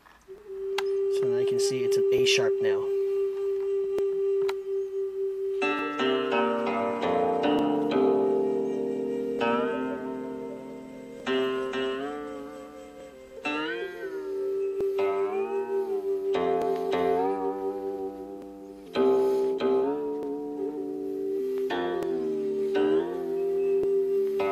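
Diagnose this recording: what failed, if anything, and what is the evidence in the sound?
A short click or pop recurs at a steady interval of 1.8 s, from 0.38 s through 23.84 s, about fifteen times in all. This is likely clock drift buffer slips at the driver or buffer stage: two devices on independent clocks disagree by something like 700 ppm, so the buffer between them gradually fills or drains until a block of roughly seventy samples is dropped or repeated, leaving a discontinuity in the waveform each time.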